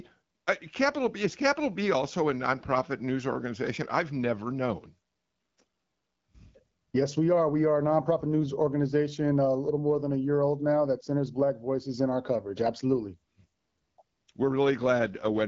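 From 15.01 to 15.47 s, an AMR rate drop makes the speech rougher and more synthetic, fitting a drop to 8.85 kbit/s. Unlike a dropout, there is no gap and no lost bandwidth.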